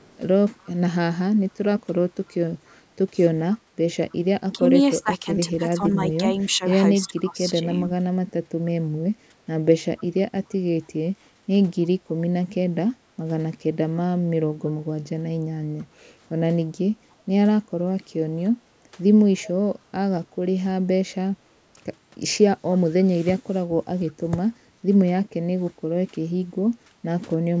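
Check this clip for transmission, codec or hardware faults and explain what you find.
Three related faults run through this speech, all tied to an echo canceller on a speakerphone-style call.

Echo leak, at 0.0 to 4.15 s, 9.98 to 12.11 s, 17.11 to 19.43 s and briefly at 24.07 to 24.12 s: the far end's canceller likely failed to remove all of its loudspeaker pickup. It returns a faint copy of the speech 293 ms late, very quiet, roughly 30 to 40 dB below the direct sound.

Speech suppressed in double talk, from 3.57 to 7.9 s, 15.79 to 18.97 s and 22.87 to 23.37 s: with both sides talking at once, the canceller likely couldn't separate talker from echo and attenuated everything. The voice dips by up to roughly 15 dB in short pieces.

Background gated by the echo canceller, at 3.59 to 3.71 s and 11.34 to 11.47 s: the canceller clamped the microphone while the loudspeaker played. The room sound drops by about 12 dB and then about 10 dB for a moment before recovering.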